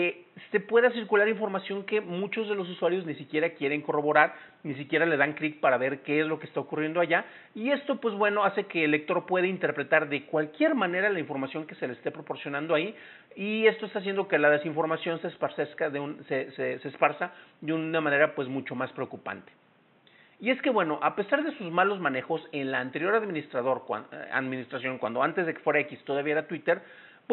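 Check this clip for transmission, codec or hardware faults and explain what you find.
No faults turn up when checking this clip.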